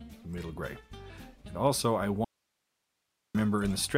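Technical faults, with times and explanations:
2.25–3.35 s, audio dropout to a faint residue: the source likely dropped out while the path stayed open, so the sound cuts abruptly to 1.1 s of faint hiss.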